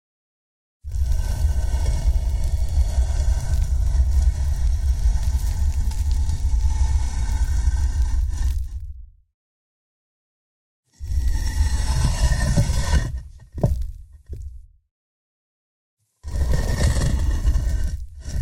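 From 0.11 s to 18.31 s the sound carries periodic USB or driver dropouts. Something blocks the audio driver or USB bus at a fixed interval of about 64 ms, roughly 15 times a second. Each time, a sliver of audio, around a tenth of a millisecond, is skipped outright rather than filled with silence. The result is a steady train of ticks, some three hundred in all, heard wherever there is signal.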